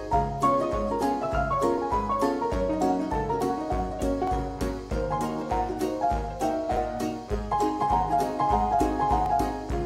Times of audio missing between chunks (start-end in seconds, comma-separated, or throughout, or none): 4.27, 6.77, 9.26